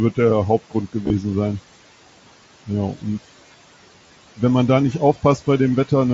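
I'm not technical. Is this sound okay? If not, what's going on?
No, not quite. There's constant noise suppressor artifacts: a cleanup filter pushes the background noise way down between phrases and lets it back under the talking, so the leftover noise seems to pump.

There's also concealed Bluetooth headset packet loss, at about 1.04–1.10 s and again at 3.99–4.10 s, just before "wenn man da nicht". Small chunks went missing between headset and phone, and the receiver filled them by repeating recent sound, leaving a short buzzy, warbly roughness.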